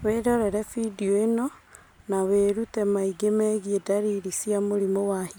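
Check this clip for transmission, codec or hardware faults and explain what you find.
No transmission or hardware faults turn up anywhere.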